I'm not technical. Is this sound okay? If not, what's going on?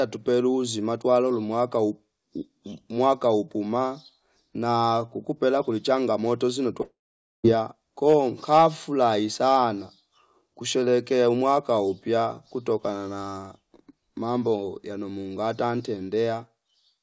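No. This is most likely a long network dropout: for a little over half a second, from about 6.82 s to 7.46 s, the speech stopped arriving over the connection. The receiving end tried to cover the gap by stretching out the last bit of sound into a brief fading buzz, then fell to silence for about half a second. When the speech returns, that missing piece is simply gone, not delayed. The speech also has its top end cut off above 8 kHz, as is typical for a call line.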